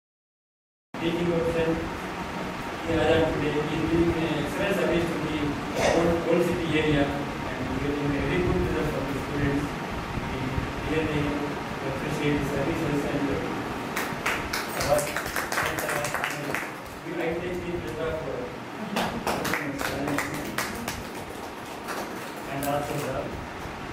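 The audio opens with digital silence until 0.94 s, then jumps abruptly into a sound already underway with no attack: a cut-off start, from capture beginning late.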